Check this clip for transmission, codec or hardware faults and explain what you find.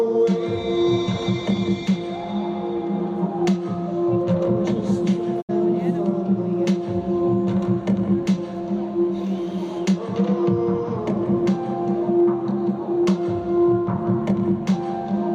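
There's one fault: a digital broadcast dropout from about 5.40 to 5.51 s. The audio fades out over roughly 20 ms, goes silent, then picks up again further along. The receiver either lost the signal or got frames that failed their checksum, so it muted until clean frames came back. About 64 ms of what was sent is gone, which fits a couple of dropped frames, and you hear it as a short hole with a quick fade rather than a hard click.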